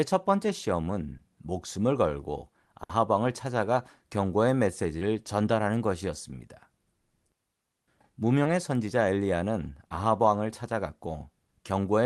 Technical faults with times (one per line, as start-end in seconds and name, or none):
1.17-1.21 short concealed packet loss
2.83-2.91 burst of packet loss
4.99-5.03 short concealed packet loss
8.43-8.47 short concealed packet loss